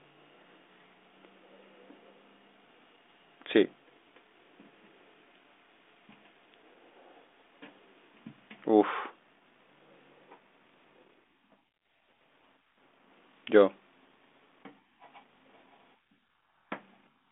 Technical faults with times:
none

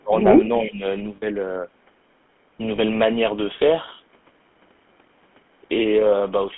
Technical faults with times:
0.00-6.58 GSM full-rate codec
0.00-0.14 speech suppressed in double talk
1.16-1.23 lost GSM frames
2.76-2.78 lost GSM frames

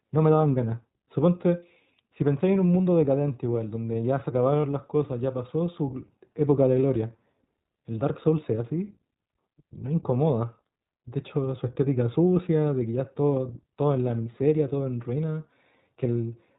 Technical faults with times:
0.00-16.59 iLBC codec
4.62-4.64 lost iLBC frames

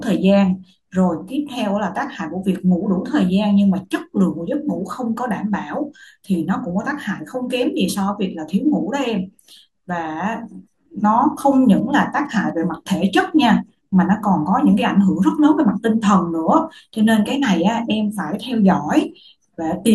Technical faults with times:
11.55-12.51 GSM signalling bursts

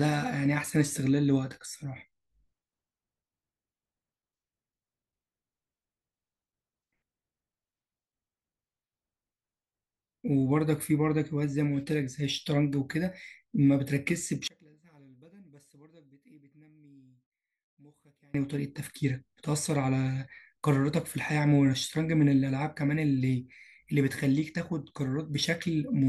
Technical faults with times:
14.48-18.34 one channel inverted

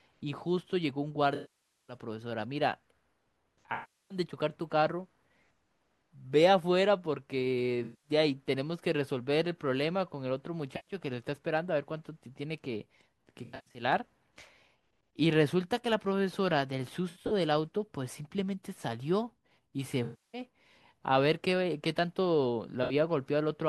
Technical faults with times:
1.35-1.97 AAC frame loss with concealment
3.74-4.18 AAC frame loss with concealment
7.83-8.10 AAC frame loss with concealment
10.76-10.94 AAC frame loss with concealment
13.44-13.82 AAC frame loss with concealment
17.09-17.32 AAC frame loss with concealment
20.03-20.42 AAC frame loss with concealment
22.83-22.93 AAC frame loss with concealment

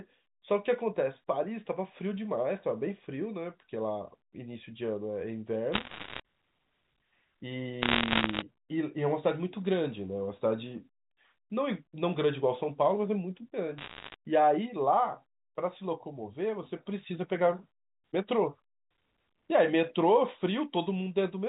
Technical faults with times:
5.72-6.20 bit errors on a digital phone line
7.82-8.42 bit errors on a digital phone line
13.78-14.15 bit errors on a digital phone line

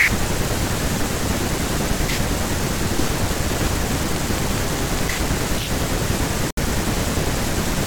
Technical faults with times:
4.16-5.83 train of clicks
6.51-6.57 gap at a join of encoded pieces

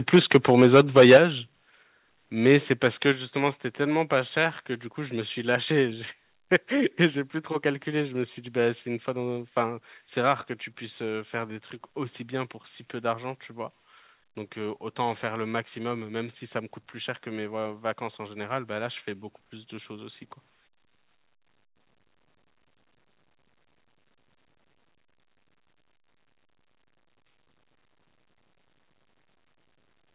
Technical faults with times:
0.14-1.18 microphone overload
0.16 microphone volume stepped down
1.17 microphone volume stepped down
3.12 microphone volume stepped down

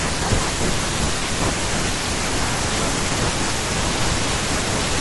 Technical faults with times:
0.00-5.00 low-delay AAC compression
1.19-1.22 AAC frame loss with concealment

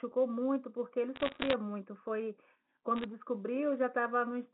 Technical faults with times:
1.16-1.53 bit errors on a digital phone line
2.96-3.04 bit errors on a digital phone line

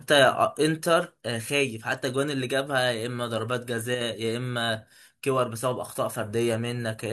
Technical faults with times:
3.95-4.01 one channel drops out

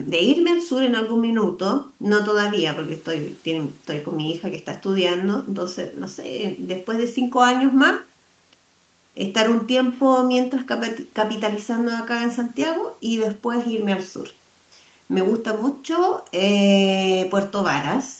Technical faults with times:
none

